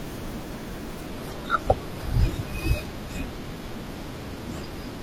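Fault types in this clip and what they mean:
Adaptive stream at a lower bitrate: from 1.07 s to the end, the speech abruptly turns duller and synthetic up top, with nothing above 14.9 kHz and no gap. The stream switched to a leaner version, which fits 96 kbit/s AAC-LC giving way to 24 kbit/s HE-AAC.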